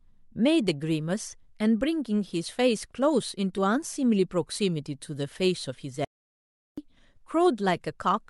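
At 3.54 to 3.59 s, damaged data in the compressed stream makes the decoder lose sync, giving a brief glitch. From 6.05 to 6.78 s, an audio dropout to silence removes about 0.73 s of speech; the gap is silent with no room tone, most likely from a lost input.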